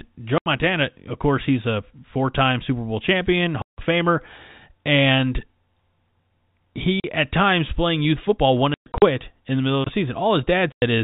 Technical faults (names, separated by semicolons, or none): packet loss filled with silence